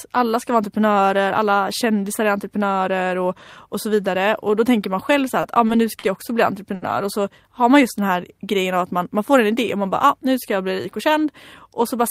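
Four brief hitches break the flow of this speech clip: a sound is briefly held too long, with a slight buzz or dip, at 5.41, 5.67, 5.99 and 6.75 s, just after "man själv så här" and on either side of "jag också bli". Each is a short stall from a late packet. The jitter buffer ran dry, the receiver stretched the last sound by about 20, 20, 40 and 60 ms, then resumed where it left off, so nothing is lost.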